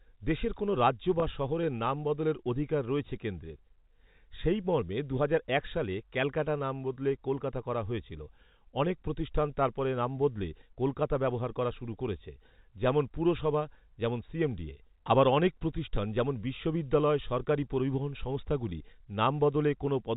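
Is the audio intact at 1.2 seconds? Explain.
No. At 1.2 to 1.22 s, between "দেশের কোনও রাজ্য" and "শহরের নাম বদলের অধিকার", the sound briefly holds on a slightly buzzy, sustained tone. This is packet loss with pitch repetition. About 20 ms of audio went missing, which fits one lost packet, and the receiver filled the gap by repeating the last pitch period of the narrowband G.711 telephone signal instead of leaving silence.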